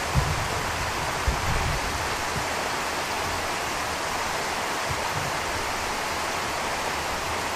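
From the first moment to the end, the sound is dull, with upper frequencies missing and a granular, gurgling roughness that is plainly audible. This is MP2 compression, and the likely cause is a Layer II encoder short of bits, at a rate around 80 kbps. It switches off whole upper sub-bands and coarsely quantises the rest. Unlike MP3 or AAC artefacts, which smear and swirl, this roughness is steppy, with bands flickering in and out.

At 1.98 s there is a brief burst of DAB burbling. A few bit errors, at a very low rate, got past error correction into the MP2 data. The corrupted samples put short blips of noise into individual sub-bands, which points to only a handful of damaged frames. This differs from the steady compression texture because it is a sudden burst. It is also not a click or dropout, because the sound is not interrupted.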